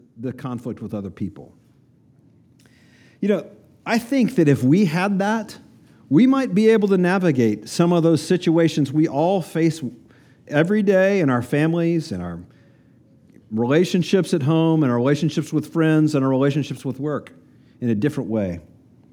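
From 0.15 to 1.25 s and again from 3.21 to 5.58 s, before "we might be able", automatic gain rising lifts everything by about 5 dB, then about 4 dB. Background swells with the speech, unlike a talker simply getting louder.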